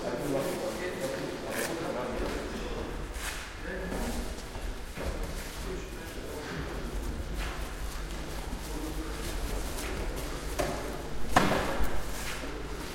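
At 6.63 s a mains buzz appears and continues to the end of the clip. It is a steady, raspy tone built on 50 Hz, sitting only about 10 dB below the wanted sound, so it is plainly audible. Sharp switching spikes, of the kind a dimmer, rectifier or poorly shielded cable lets in, arrive twice per mains cycle. That spreads energy across harmonics of 50 Hz well into the kHz range, giving the buzz its edge.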